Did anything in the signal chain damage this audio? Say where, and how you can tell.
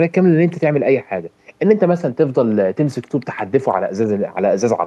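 No, nothing audible in this speech recording points to damage at any stage of the chain, from capture through conversion, processing, transmission, storage or playback.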